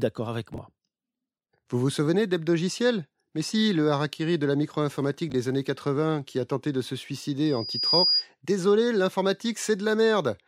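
Two brief jumbled spots turn up, at 0.54 to 0.58 s and again at 5.3 to 5.34 s. These are chunks out of order: in each case a 20 ms piece of audio landed one slot late and played after the piece that should follow it, so nothing is missing but the sequence is scrambled and you get hard joins. Later, from 7.45 to 8.26 s, there's a loudspeaker feedback squeal. A single 4.9 kHz tone swells up over about half a second until it sits somewhat louder than the rest of the audio. That's the mic hearing its own speaker with the loop gain above one at that frequency.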